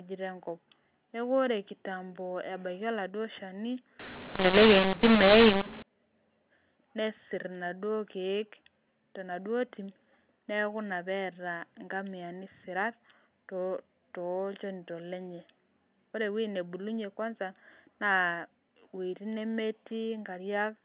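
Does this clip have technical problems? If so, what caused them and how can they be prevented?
Yes. From 3.99 to 5.82 s the speech turns harsh and gritty, levels lurch unevenly, and pauses fill with hiss. This is mu-law and A-law mixed up: A-law telephone samples were decoded as mu-law, scrambling every level. Prevent it by signalling the G.711 law explicitly and matching the decoder to it.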